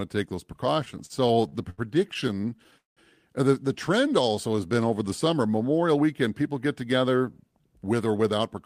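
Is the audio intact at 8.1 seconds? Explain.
No. From 7.51 to 8.57 s the speech is under a jitter buffer speed-up. The receiver had built up more buffered audio than it targets, so it trimmed short slices a pitch period or so long, again and again, shedding about a tenth of a second and running the speech at 109% speed. It sounds rushed, yet the pitch stays put, which separates it from a resampling or clock error, where faster playback would also raise the pitch.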